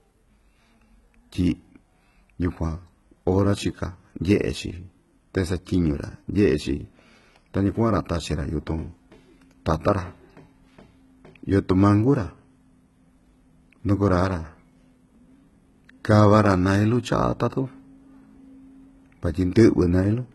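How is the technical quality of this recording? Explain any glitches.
The recording has one clear technical problem, present throughout: heavy damage from low-bitrate HE-AAC compression. Nothing is audible above 11.8 kHz, and the treble sounds synthetic, with s sounds coming across gritty, metallic and lispy. The likely cause is spectral band replication. The encoder kept only the lower spectrum and rebuilt the top by copying lower bands upward under a coarse envelope, so the rebuilt harmonics don't line up. That fits a bitrate around 16 kbps.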